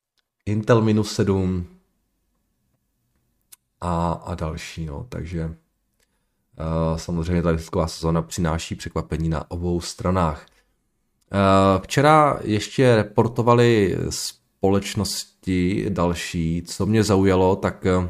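No technical faults can be heard anywhere in the speech. Nothing in the recording needs a timestamp or a technical explanation.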